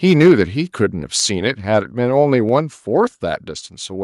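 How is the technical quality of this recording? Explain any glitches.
The recording has audible technical problems: a distorted, harsh opening followed by the speech getting quieter in a series of abrupt steps.

From 0.06 to 0.33 s there is microphone overload. The loudest speech peaks likely run about 5 dB past the converter's ceiling, so their tops are sliced flat on a small but audible share of samples, around one in twenty. That squaring-off adds a gritty crackle riding on the syllables themselves. Unlike a noisy cable or dropout, the distortion tracks the loudness of the speech.

Then the microphone volume is stepped down at 0.28, 1.47, 2.49 and 3.51 s, by about 2, 2, 3 and 3 dB respectively. Each drop is an instant level change with no added distortion. Speech and background fall together, which is what you'd expect if call software is likely cutting the input gain in discrete increments after detecting that the microphone was too loud or clipping. 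A compressor or fade would instead move smoothly and recover.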